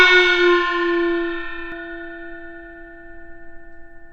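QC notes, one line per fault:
0.0–1.72 s, doubled audio track: already present when the clip opens, every event is followed about a tenth of a second later by an identical, full-band repeat at roughly the same level as the original, giving a smeared, flam-like slap with no decay or room colour. The second copy stops abruptly at 1.72 s. The likely cause is the same audio arriving twice, once through a slower capture path or an edit leaving two offset copies.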